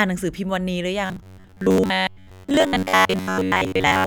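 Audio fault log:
1.06 s to 4.06 s, robotic sound from repeated short buffers: from just past the one-second mark to the end, the voice flattens into a stiff metallic buzz at about 94 Hz that still loosely tracks the speech. That pitch fits one tiny chunk of roughly 10.7 ms being looped. Most likely, new audio isn't arriving fast enough, so playback keeps replaying that last chunk and skips much of the real signal, which is why it sounds so mechanical.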